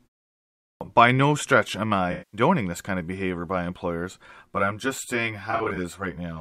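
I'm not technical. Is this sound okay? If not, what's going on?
No, there are three separate problems.

First, a clipped start after a pause. The clip opens with about 0.6 s of silence, and when the sound begins at 0.61 s, roughly the first 0.2 s is missing, so the phrase "by no stretch am" starts abruptly, without its opening. This happens when the playback device dozes off during silence and takes a moment to wake. Unlike a dropout, nothing is smeared or noisy: the start is simply cut.

Second, AAC frame loss with concealment, twice. From 2.12 to 2.41 s, between "no stretch am I" and "this kind of behavior", about 0.21 s of audio was lost and the decoder papered over it by guessing from the last good moment, which gives a smeared, noisy or phasey patch instead of silence. From 5.51 to 5.77 s it happens again, but broken up: about 0.13 s lost in pieces of up to roughly 40 ms, scattered across a quarter second. 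Unlike the clipped start, these occur mid-sentence and leave a blurred stretch rather than a clean cut.

Third, channel delay (comb filtering). From 4.46 s, just after "of behavior by employers", to the end, one of two copies of the sound arrives about 10 ms late and the two are mixed together. This cancels evenly spaced pitches starting around 40 Hz, giving a hollow, phasey colour near the point where it begins to sound doubled. Unlike the frame losses, it does not come and go. It stays steady to the end.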